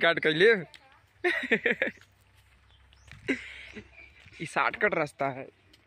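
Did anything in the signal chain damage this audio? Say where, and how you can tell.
Yes, at the driver or buffer stage. About four short clicks fall at a strict 1.47 s spacing, from 1.16 s to 5.58 s, each landing mid-signal. That metronomic regularity points to clock drift buffer slips rather than random dropouts or interference. The likely cause is two independently clocked devices differing by roughly 500 ppm, so the buffer between them slowly drains or overfills until a few dozen samples are skipped or repeated.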